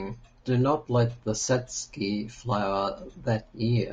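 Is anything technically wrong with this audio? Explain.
Yes. Throughout, the speech sounds rough and grainy, with noise between harmonics. Low-delay AAC compression is the likely cause; its short frames resolve pitch poorly, fitting a rate near 32 kbps.

From 1.45 to 1.48 s, just after "do not let the", there is AAC frame loss with concealment. One frame, about 20 ms, was rebuilt from the previous spectrum, leaving a brief smeared, phasey patch.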